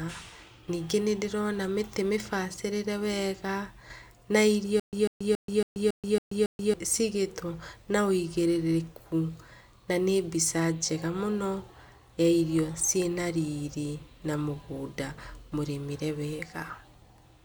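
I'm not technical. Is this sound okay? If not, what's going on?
No. From 4.80 to 6.74 s, after "na irio", there's a stutter with silent gaps: the same 146 ms snippet plays seven times, each followed by 131 ms of dead silence, likely from a stalled player retrying. Unlike a plain dropout, the sound repeats, and the missing speech never arrives before "cigĩtwo na".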